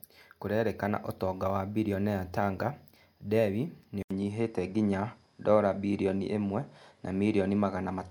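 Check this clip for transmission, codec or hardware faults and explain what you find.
One fault: the input likely switched to a poorer device partway through the speech. From 4.03 s to the end, the recording appears to have moved to a different, lower-grade input path. There is a gap of about 80 ms at the switch. After it, the narrower device passes nothing above 11.4 kHz, so the speech loses its air and turns duller. A faint new background noise also appears, roughly 45 dB below the speech, while the overall loudness stays about the same.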